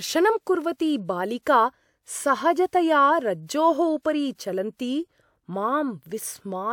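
Nothing technically wrong turns up anywhere in this bit of speech, so there's no fault here to point to.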